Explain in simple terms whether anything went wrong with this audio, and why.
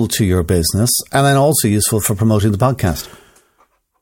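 Nothing went wrong with this speech recording. No technical faults can be heard anywhere in it.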